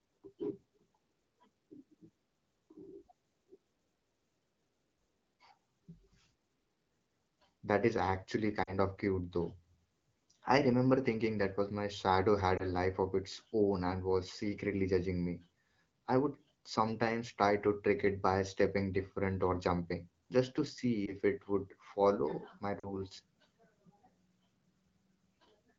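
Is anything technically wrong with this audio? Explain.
Yes, there are lost AMR speech frames, four short dropouts in this speech. They fall at 8.63–8.76 s, at 12.57–12.68 s right after "was my shadow had" and before "of its own and", at 21.06–21.13 s between "or jumping just to" and "it would follow my", and at 22.79–22.90 s just after "it would follow my." The first and last sound like about 40 ms of missing audio, which fits two 20 ms frames each. The middle two fit a single frame. When a frame fails its check, the decoder keeps going on the last good pitch and vocal tract settings while turning the gain down. So each single-frame spot gives a quick dip or warble, the two-frame runs drop to near silence, and the voice comes back weak or rough for a moment. The wideband (HD Voice) coding around them sounds like AMR-WB at about 12.65 kbit/s, with only light codec colouring.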